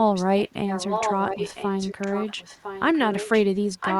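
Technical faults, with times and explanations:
0.14–0.5 s, 0.67–3.42 s and 3.8 s to the end, echo leak: a delayed copy of the speech comes back about 1.0 s after the original. In the first stretch it is faint, roughly 15 dB below the direct speech. From 0.67 s it is much stronger, only about 5 dB down, so it competes clearly with the talker. The steady one-second lag likely comes from a loudspeaker-side echo canceller that let its microphone pickup through and returned it down the line.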